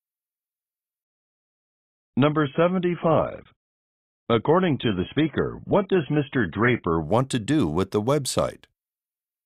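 An adaptive stream at a lower bitrate runs from 1.04 to 7.04 s: the quality drops abruptly with no gap, everything above 3.8 kHz vanishes and codec artefacts thicken, which fits a slowed connection forcing a switch to a low-bitrate AAC version, before full quality returns at "to do with the".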